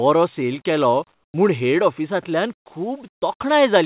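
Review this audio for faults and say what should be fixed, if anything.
Comfort noise in place of the background: the sender's voice detector likely stopped transmission during pauses, leaving the receiver to synthesise filler noise. From 1.14 to 1.34 s and from 3.14 to 3.22 s, the real background drops out and a flat, featureless hiss takes its place. It is about 9 dB quieter in the first gap and about 5 dB quieter in the second.

Onset clipped by the voice detector: the detector was likely about 20 ms slow to register that speech had resumed. At 1.32 s, the opening of "म्हूण हेड ऑफिसांतल्यान" was replaced by comfort noise, so the word starts abruptly without its soft beginning. This happens within a call path whose audio already stops at 4 kHz.

To fix both, disable discontinuous transmission, or add a longer voice-detector hangover and pre-roll, so that the real background and speech onsets are always sent.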